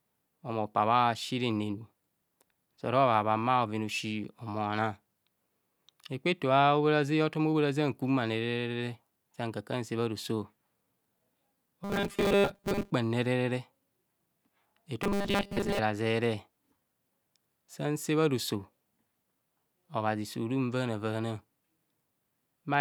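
From 11.84 to 12.92 s and again from 15.03 to 15.79 s, the speech turns into a rigid metallic buzz fixed at 200 Hz. This is robotic sound from repeated short buffers, likely caused by audio arriving too seldom, so a 5 ms slice is looped while most of the real audio is skipped.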